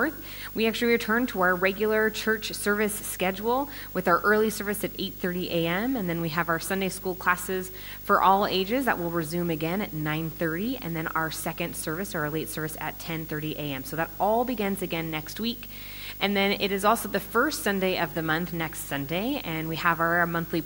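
Video or display buzz runs throughout: a screen or video cable is coupling into the audio, giving a 50 Hz field-rate buzz with hash and a 15.6 kHz line whine, roughly 15 dB below the signal.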